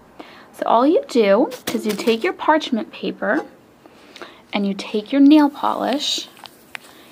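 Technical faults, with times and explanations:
5.31 to 7.12 s, pre-emphasis left on: from 5.31 s to the end, the sound turns thin and bright, with sibilant, edgy treble and little weight underneath. The high end was lifted before recording or transmission along the standard FM 50 µs curve, about 11 dB up at 10 kHz relative to 1 kHz, but the matching de-emphasis cut was never applied on playback. The treble stays exaggerated and the balance tilts sharply upward.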